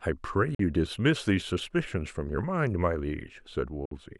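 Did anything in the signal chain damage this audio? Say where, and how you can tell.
Yes. A Bluetooth dropout appears at 0.55–0.60 s and again at 3.85–3.92 s. The speech cuts abruptly to silence for 44 ms, then 58 ms, and resumes further along rather than where it stopped. The cause is likely late wireless packets being discarded at playback.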